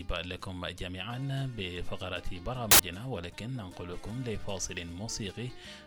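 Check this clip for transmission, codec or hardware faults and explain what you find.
One fault is present: a short stretch of samples built from the wrong bytes, from 2.71 to 2.79 s, about 80 ms. The reader assembles each sample's bytes incorrectly, so the rapidly varying low-order bits land in the most significant positions. The result is a sudden blast of loud, harsh broadband noise in place of the sound. Unlike an added noise burst, it replaces the signal entirely rather than sitting on top of it.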